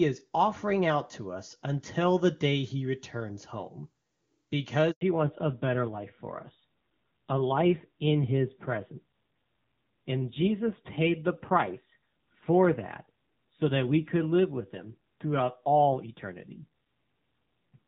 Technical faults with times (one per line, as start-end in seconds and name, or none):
4.91-5.01 handover gap
5.01-17.87 fallback to narrowband